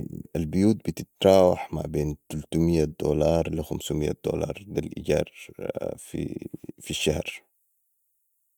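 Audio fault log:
No audible faults anywhere in this speech recording.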